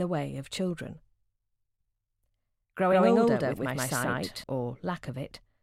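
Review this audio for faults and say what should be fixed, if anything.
From 2.88 to 4.44 s a doubled audio track appears: a full-band copy, roughly as loud, trails by about 150 ms, likely from a second capture path. On a spectrogram every event shows a twin shifted right, and the waveform shows duplicated transients that begin and end abruptly. To prevent it, route the source through a single capture path and check edits for overlapping duplicate regions.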